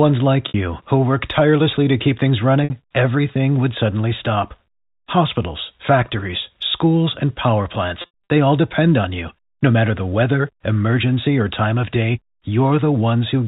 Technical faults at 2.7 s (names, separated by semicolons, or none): packet loss with pitch repetition